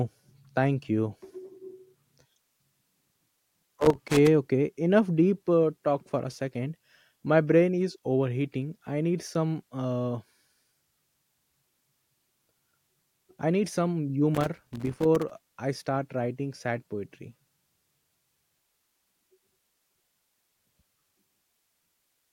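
Loose connector crackle hits twice, 3.01 to 4.27 s and 14.35 to 15.49 s, just before "I start writing sad": a worn contact chopping the speech into scratchy, irregular crackle.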